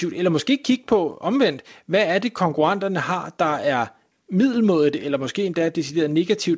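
Speech carried over a wideband call path with nothing above 8 kHz, which fits G.722, and no faults to report.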